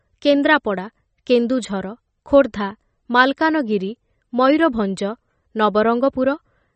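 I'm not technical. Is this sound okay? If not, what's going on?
No, the speech sounds muffled above 8.5 kHz throughout and has a watery, swirly shimmer, likely from MP3 compression; a plain treble cut would dull it without that swirl.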